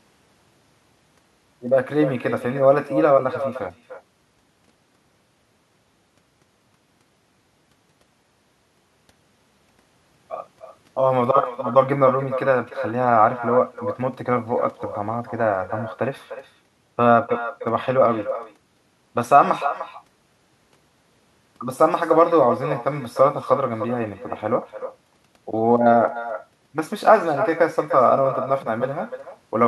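Echo with no canceller runs through the whole speech clip: the far end's loudspeaker output reaches its microphone and nothing subtracts it, so each phrase returns roughly a third of a second later as a thinner copy, about 11 dB quieter.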